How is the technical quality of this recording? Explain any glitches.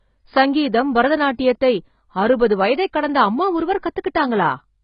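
The recording sounds dull and smeared from start to finish, with nothing above 5.1 kHz and a warbling, fizzy texture on sustained sounds and sibilants. The damage is heavy throughout, most likely from AAC compression. To save bits, an AAC-LC encoder discards the top of the spectrum and coarsely quantises what remains, leaving gaps that turn into swirling artefacts. A cut-off this low and damage this severe point to a very low bitrate, around 16 kbps.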